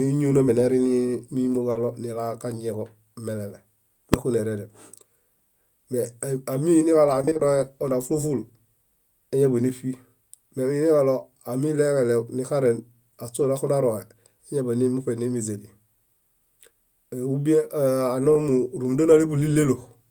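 At 1.71 to 1.77 s, just before "nilaġañieġo melele", a short concealed packet loss fills 40 ms by extending the preceding sound, leaving a brief smear. Overlapping it, from 1.75 to 1.81 s, a lost packet rebuilt from error correction covers about 40 ms with a low-bitrate copy that sounds rougher and noisier than the surrounding speech. At 4.14 s, after "nilaġañieġo melele", invalid numbers at full scale pin a 1.33 ms block to one extreme value, which fits a 64-sample block, and produce a single loud bang. From 7.21 to 7.41 s, repeated packet loss gives a robotic sound: five gaps of up to 20 ms each are patched in turn, so half the span is concealed and the speech turns choppy. At 13.39 to 13.45 s, another lost packet rebuilt from error correction roughens about 40 ms. At 18.33 to 18.37 s, a short concealed packet loss fills 20 ms, heard as a brief wobble.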